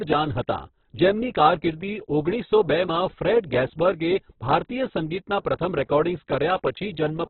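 Throughout, the speech is muffled and grainy, likely from heavy Opus compression at a very low bitrate. A spectrogram shows a flat ceiling, with nothing above 4.4 kHz.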